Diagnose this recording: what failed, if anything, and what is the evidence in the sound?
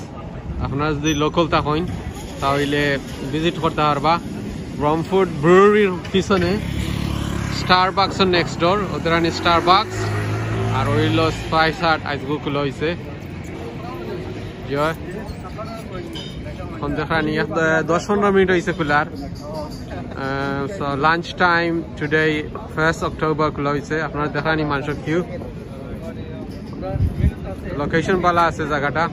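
Nothing failed in this recording, and the sound gives no evidence of any fault.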